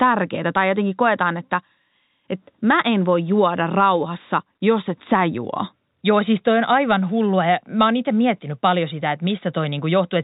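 Speech, with no technical faults to report. It has the sound of G.711 telephone coding working as intended: nothing above 4 kHz, and any quantisation noise is faint and rises and falls with the speech level.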